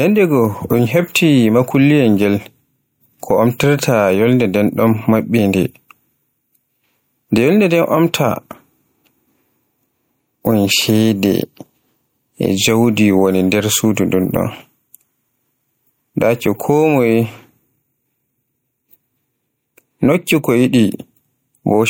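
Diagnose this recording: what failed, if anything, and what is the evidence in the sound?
Gain pumping throughout: the gain swings around 10 dB, likely a fast limiter clamping far-too-hot input gain.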